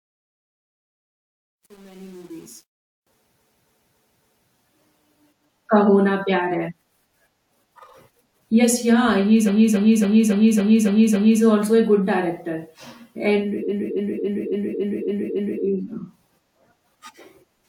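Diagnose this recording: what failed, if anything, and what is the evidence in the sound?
Truncation distortion on a fade in the sample-format or gain stage. The fade-in from 0.0 to 3.07 s sounds gritty and steppy, worst up to about 2.79 s. The fade was computed at only 8 bits without dither, so the low-level waveform collapses into coarse steps.

Repeated frames at the codec or storage stage. A 278.6 ms block replays at 3.37–4.48 s (four extra plays, 1.11 s added), at 9.45–11.40 s after "yeah he's" and before "also a good director", and at 13.68–15.63 s (seven extra plays each, 1.95 s added). The audible stutter fits a run of about six compressed frames being written or sent repeatedly.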